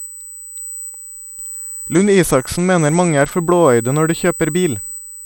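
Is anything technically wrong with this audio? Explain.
Yes, there are two faults. USB whine runs throughout: a steady 8 kHz tone, roughly 15 dB below the speech, from the bus's 125-microsecond microframe current leaking through power or ground.

A Bluetooth SBC bit pool drop lasts from 1.95 to 3.32 s, ending before "for blåøyde når de". The treble dulls and grit rises, fitting a cut to about 90 kbps that starves high sub-bands.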